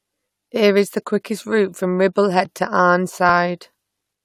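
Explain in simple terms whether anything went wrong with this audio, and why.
At 2.45 s there is a single quick tick in the speech. That is a block of digital silence: a tiny slice of sound, under 3 ms, dropped to nothing and came straight back. The sharp edges make the click. The likely cause is the program not delivering that 128-sample buffer in time.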